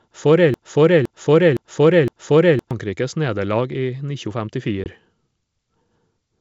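From 0.54 to 2.71 s the speech falls into a broken-record loop: a fragment of about 0.51 s plays four times back to back, likely because the player or stream stalled and kept resending its last buffer. The waveform shows identical blocks repeating, and the spectrogram shows the same pattern stamped across, with the intended audio lost.

At 4.84 to 4.89 s comes packet loss on the ADPCM call, typical of a G.722 link otherwise heard at full wideband. A hard-edged 20 ms gap, about one packet, appears as a flat line and a blank vertical stripe. The decoder's predictor then resynchronises, leaving the returning speech slightly distorted for a moment.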